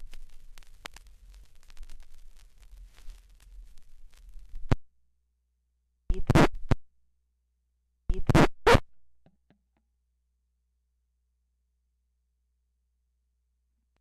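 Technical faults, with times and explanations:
6.53 to 8.52 s: stream segment repeated. The player queued the same stretch of stream twice, so about 2.0 s of audio plays a second time. Listeners hear the sound jump back to material already heard, with a small blip marking the seam.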